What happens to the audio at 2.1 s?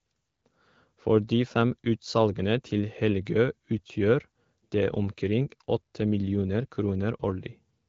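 Nothing goes wrong at 2.1 s: the speech carries on intact through that moment, with only the light coding character of the AMR wideband (HD Voice) codec at 12.65 kbit/s.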